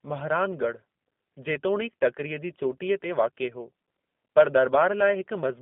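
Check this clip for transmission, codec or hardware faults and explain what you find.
The speech carries G.729 codec damage from start to finish. The band runs only from 200 Hz to 3.5 kHz. The codec rebuilds each short frame from a vocal tract filter, a pitch predictor and a few pulses, which fits an 8 kbit/s codec. The result sounds plainly rough and synthetic.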